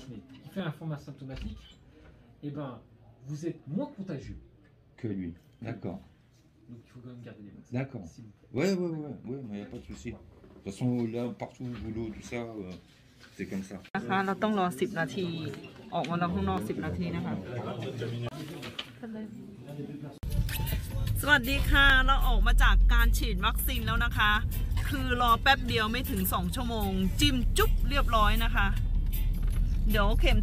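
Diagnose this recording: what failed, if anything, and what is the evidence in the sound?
A regular click recurs every 1.33 s from 0.60 to 29.89 s, most likely clock drift buffer slips at the buffer between two devices. Their clocks differ by a few hundred ppm, so roughly fifteen samples are periodically dropped or repeated. The strict periodicity separates this from random network dropouts.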